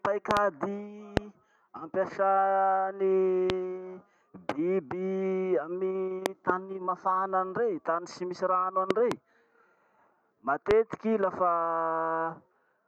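Loud pops cut through the speech at 0.31 to 0.39 s (a double), 1.17, 3.50, 6.26 to 6.52 (double), 8.91 to 9.14 (double) and 10.71 s. They are likely voltage glitches and peak roughly 20 dB above the signal, showing as tall waveform spikes and full-height vertical spectrogram stripes.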